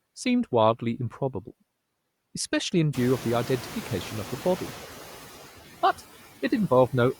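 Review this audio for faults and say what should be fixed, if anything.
Noise suppressor artifacts run through the whole clip. The suppressor pulls down each frequency band it judges to be steady noise, frame by frame, by about 11 dB. That gating makes the residual noise dip in the gaps and swell back under the speech. Prevention: reduce the suppression depth and smooth the per-band gains over time.

Noise suppressor catching up occurs from 2.94 to 4.83 s. The room noise jumps by about 22 dB at around 3 s, and the suppressor's noise estimate lags the change. For the first stretch it cuts the new noise by only about 5 dB, so the louder background comes through largely intact, sitting about 17 dB below the speech. Then it sinks over roughly 1.9 s as the estimate settles. Prevention: let the noise estimate track sudden rises faster.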